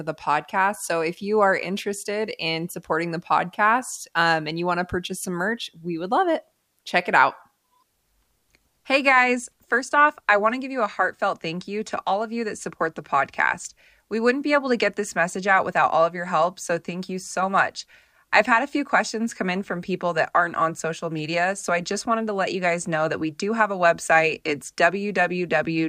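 Nothing in this speech recording stands out as a technical fault, so there's nothing to flag here.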